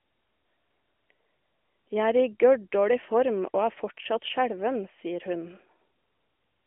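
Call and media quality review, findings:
No faults found.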